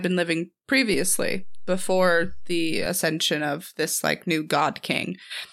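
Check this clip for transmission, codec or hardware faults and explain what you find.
There is one fault, a DC step.

At 0.94 s, after "been living", a low thump sounds as the waveform's zero line jumps by about -28 dBFS. The offset holds until 2.86 s, where a second thump marks its return just before "of this like new", while the speech continues unchanged.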